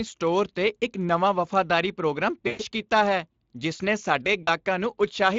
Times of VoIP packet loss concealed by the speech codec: 2.47-2.62, 4.43-4.49

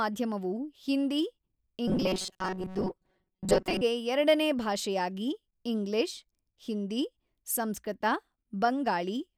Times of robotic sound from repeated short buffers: 1.88-3.82

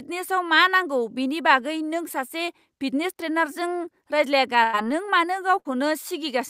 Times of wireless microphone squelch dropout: none

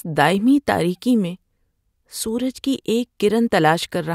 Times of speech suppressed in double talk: none

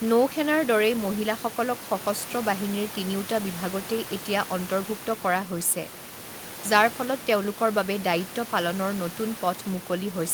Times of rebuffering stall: none

